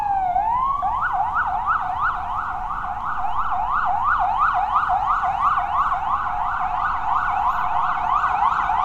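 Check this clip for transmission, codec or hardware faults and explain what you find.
Nothing audible here points to a transmission, codec or hardware problem anywhere in the clip.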